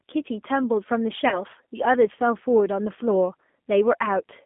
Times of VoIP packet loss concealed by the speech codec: 1.29-1.44

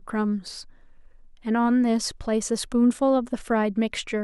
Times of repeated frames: none

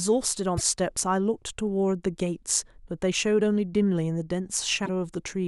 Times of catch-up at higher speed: none

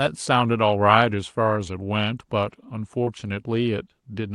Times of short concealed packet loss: 3.03-3.09

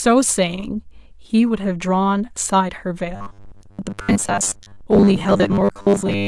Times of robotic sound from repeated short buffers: 3.16-6.27

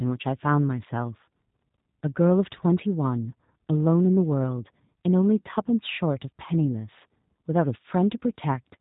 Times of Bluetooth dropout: none

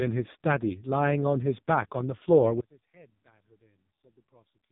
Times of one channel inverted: 2.61-4.71

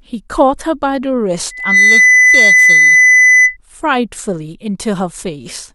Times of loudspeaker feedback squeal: 1.50-3.57

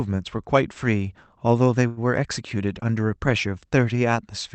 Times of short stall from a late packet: 1.87-2.00

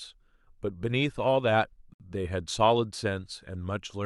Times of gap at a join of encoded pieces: 1.94-2.00

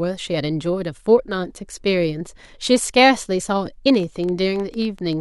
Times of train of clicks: 3.90-5.14

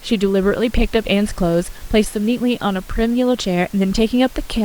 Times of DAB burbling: none

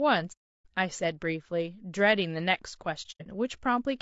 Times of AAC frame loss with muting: 0.32-0.66, 3.02-3.28

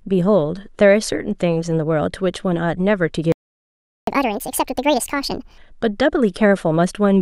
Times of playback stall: 3.32-4.07

